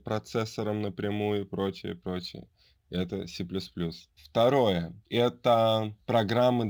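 Sample clock jitter runs throughout: an unsteady converter clock, roughly 4 µs of timing wobble, adds a hiss that tracks the speech, about 35 dB down, louder on bright, steep sounds.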